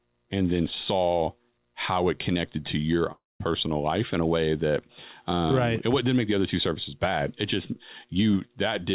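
At 3.12 s, just after "it connected to your", the sound breaks up. The last sound stretches into a buzzy tail that fades. A quiet gap of about 0.2 s follows. Normal audio returns at 3.42 s with "life in a way". About 0.28 s of the original is gone for good. This is likely a long network dropout. Packets stopped arriving, and the receiver filled the hole before falling silent. The call audio has nothing above 4 kHz, which fits G.711 A-law.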